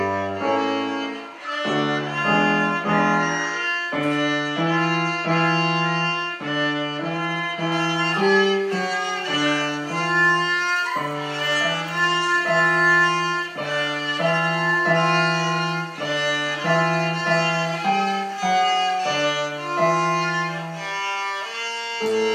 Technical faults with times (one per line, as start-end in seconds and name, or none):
7.72-22.34 pre-emphasis left on